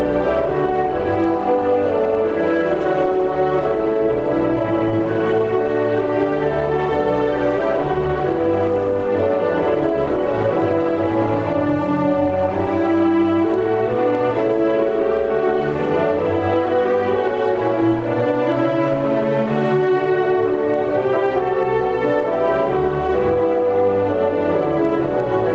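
Gain pumping runs through the whole clip, most likely because the input gain sits far too high for the microphone, so a fast limiter or compressor clamps down on each loud sound and then releases. The level swings by around 5 dB, ducking whenever something loud arrives. Loud and quiet passages end up squeezed together, giving a flattened, breathing quality over audio that stops at 8 kHz.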